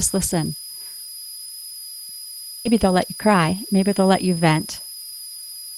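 A thin, high whistle near 5 kHz sits over the speech for the whole clip, about 15 dB below the signal and wandering slightly between roughly 4.93 and 5.01 kHz. This is a switching supply whistle: a switch-mode power supply in the chain is cycling at an audible rate, in burst mode or beating against another supply, and its pitch shifts a little as the load on it changes.

At 2.65 s the speech lurches forward with no gap at all. The two sides of the cut are butted straight together, so the sound seems to stumble rather than pause. This is a skip ahead: roughly 0.7 s of audio that was already queued was thrown away, as happens when a receive buffer overflows. Playback jumped to later material and the delay dropped by about the same amount.

From 2.75 s to 5.12 s the speech sounds hurried, running at about 111% of normal speed with no rise in pitch. This is a jitter buffer speed-up. The receiver held more audio than its target, so it repeatedly removed short slices one or a few pitch periods long. 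Over that stretch it trimmed around 0.3 s in total to bring the delay back down.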